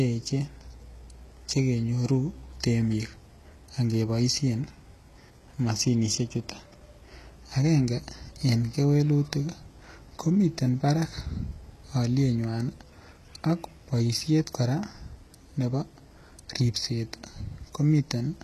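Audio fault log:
throughout: HE-AAC compression. The speech keeps a bright-sounding top up to a sharp ceiling at 12.3 kHz, with nothing above, yet that upper band sounds grainy and metallic, and the s sounds come out lispy and gritty. This is likely spectral band replication at a very low bitrate, probably near 16 kbps. The treble is patched in from lower bands and does not track the real harmonics, which is why it differs from a plain low-pass, where the top would simply go dull.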